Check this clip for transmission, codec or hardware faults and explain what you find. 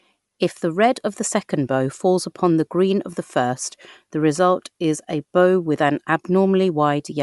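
There's one fault, and it runs the whole way through.

Bluetooth LC3 compression is the likely cause: nothing above 11.6 kHz, plus a grainy, breathy edge where noise stands in for the discarded upper spectrum, consistent with 10 ms frames at around 48 kbps.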